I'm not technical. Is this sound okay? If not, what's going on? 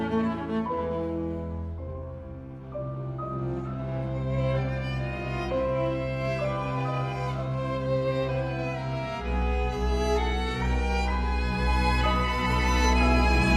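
Yes, this sound is okay. Nothing in it points to a technical problem that needs fixing.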